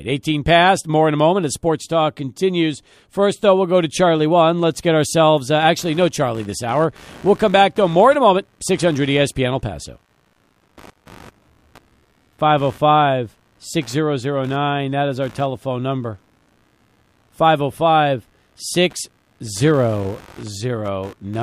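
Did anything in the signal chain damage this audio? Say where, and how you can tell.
Yes, computer activity noise in the analogue wiring. From 5.61 s, after "get ourselves uh", a buzz pulsing near 70 Hz tracks computer load through the shared ground rather than the speech, unlike steady mains hum.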